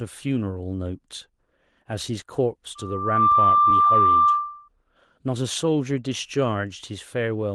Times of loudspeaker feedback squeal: 2.75-4.69

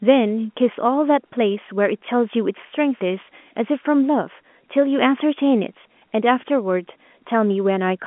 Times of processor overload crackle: none

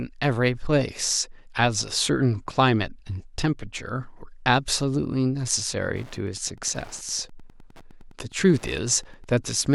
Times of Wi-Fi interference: 5.88-9.75

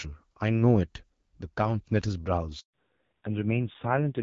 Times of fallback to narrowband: 2.73-4.22

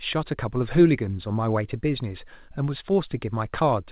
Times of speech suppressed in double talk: none

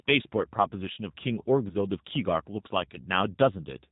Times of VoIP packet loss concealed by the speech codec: 1.69-1.76

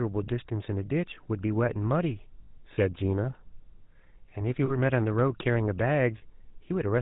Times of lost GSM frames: 2.42-2.49, 4.66-4.71, 6.18-6.24

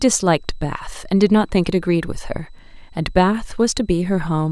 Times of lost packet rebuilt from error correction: none

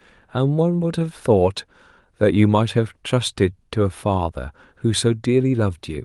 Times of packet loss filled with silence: none

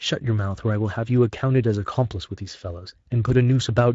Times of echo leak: none

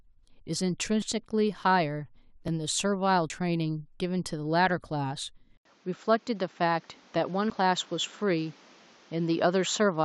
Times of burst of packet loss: none

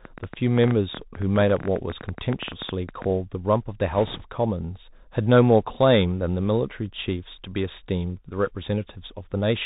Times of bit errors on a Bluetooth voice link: 3.91-4.25

